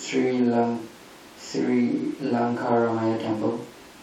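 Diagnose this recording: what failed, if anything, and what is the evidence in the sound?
Nothing failed in this speech recording, and there's no sign in the sound of anything going wrong at any stage.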